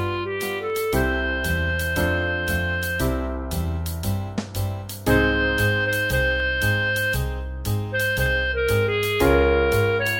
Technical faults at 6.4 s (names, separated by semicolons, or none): dropped samples